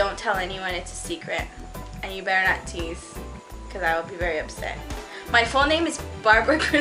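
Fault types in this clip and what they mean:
No audible faults are present.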